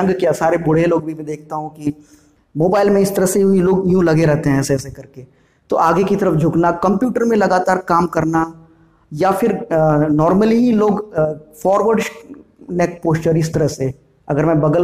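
No technical faults are audible.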